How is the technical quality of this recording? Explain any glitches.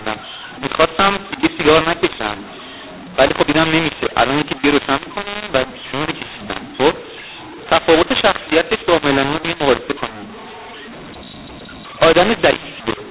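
Quality is poor for the whole clip, because of one decoding fault. The sound stops near 4 kHz, which fits 8 kHz telephone coding.

From start to end, mu-law and A-law are mixed up. The audio was coded with the mu-law curve but decoded with the A-law curve. Each 8-bit code maps to the wrong level. Some samples grow, others shrink. The speech sounds harsh and distorted. Pauses fill with noise well above silence.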